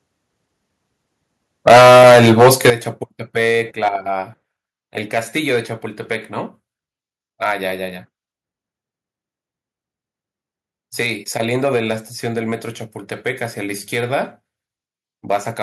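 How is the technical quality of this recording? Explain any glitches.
The technical quality is poor near the start, where distortion and sudden level drops appear together.

Microphone overload runs from 1.67 to 2.7 s. The speech turns harsh and crackly on its loudest parts. The likely cause is an input level about 10 dB too hot, so the peaks hit the converter's ceiling and their tops are sheared off, affecting nearly a third of the samples. On a waveform the peaks look flat-topped. A spectrogram shows smeared broadband energy above the voice's normal harmonics.

Microphone volume stepped down three times, at 1.69, 2.7 and 3.72 s, by about 3, 12 and 2 dB. Each time, the speech and the background fall together in a single abrupt step. The likely cause is call software reacting to the overload by cutting the device's input gain. The 12 dB drop at 2.7 s is likely the one that ends the clipping. 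On a waveform the envelope shrinks instantly at each point, and on a spectrogram every frequency band dims together in a vertical line.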